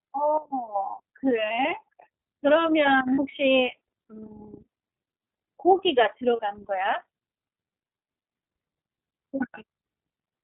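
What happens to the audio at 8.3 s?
iLBC codec coding at 8.3 s, as throughout: nothing above 4 kHz survives, and independently coded frames, consistent with 30 ms blocks, leave the speech plainly rough and synthetic.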